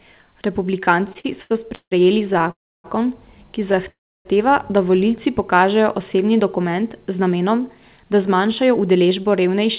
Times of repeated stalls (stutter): 1.04-1.93

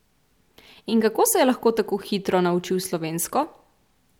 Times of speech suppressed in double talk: none

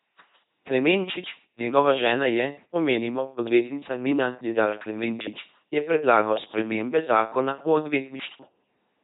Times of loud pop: none

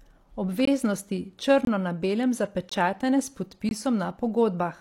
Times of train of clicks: none

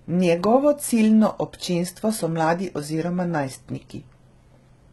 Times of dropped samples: none

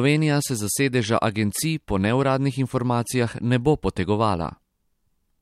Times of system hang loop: none

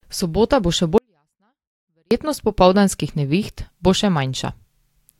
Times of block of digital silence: none

